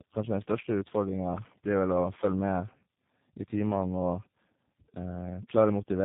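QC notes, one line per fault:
throughout, tandem speech coding: the speech passes through three speech coders in a row, separated by G.711 links, ending in what sounds like G.729A at 8 kbit/s. Each stage re-encodes the previous stage's already degraded output, so the errors compound. The result is rougher and more muffled than any single coder, with a warbly, smeared quality. Nothing is present above 3.7 kHz, which removes the upper consonant detail.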